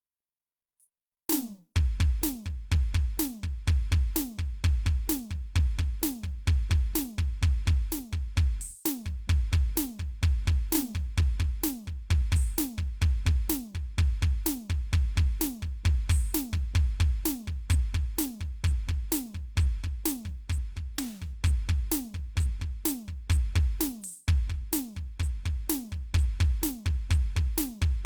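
No technical faults occur anywhere in this music.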